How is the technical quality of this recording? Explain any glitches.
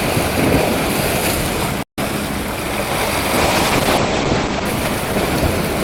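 Technical quality is compromised by two faults. At 1.83 s a playback stall cuts the audio to silence for about 150 ms until 1.98 s, most likely because the player ran short of data or its thread was blocked. From 3.39 s to the end, a call bitrate drop from 48 to 10 kbps makes the codec code more coarsely and narrows bandwidth from 20 kHz to 8 kHz. The sound turns muffled and rough, bottoming out for about 1 s.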